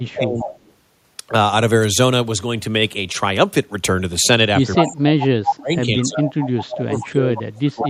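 From 0.0 to 0.5 s, 4.6 to 6.25 s and 6.59 s to the end, the voice sinks by up to about 35 dB. This is likely speech suppressed in double talk, with the canceller ducking its own talker along with the loudspeaker echo while both sides overlap. Echo leak comes at 0.38–0.73, 4.75–4.96, 5.47–5.56, 6.02–6.75 and 7.85–7.89 s. It is a repeat of the voice arriving 188 ms late, mostly about 10 dB down, though it is as loud as the voice itself at 4.75 and 5.47 s. Its likely cause is loudspeaker pickup that was not cancelled. Unlike suppression, it adds a delayed copy rather than taking level away.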